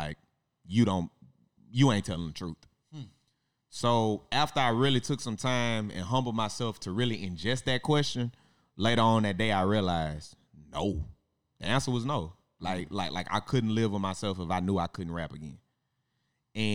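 No technical faults can be heard anywhere in this speech recording. There is no moment in the signal that calls for a timestamp.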